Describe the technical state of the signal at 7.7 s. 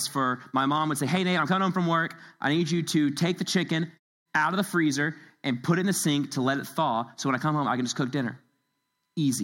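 At 7.7 s the speech signal is intact, with no fault audible at that moment.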